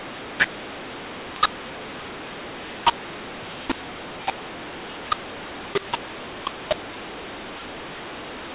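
Speech, carried over G.711 telephone coding at 8 kHz, is distorted throughout by mu-law and A-law mixed up. It was encoded as mu-law but decoded as A-law. Levels are scrambled, so the sound turns harsh, and pauses fill with noise instead of silence.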